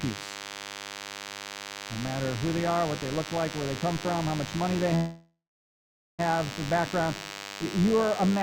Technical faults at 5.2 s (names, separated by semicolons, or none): DECT cordless phone buzz; call audio freeze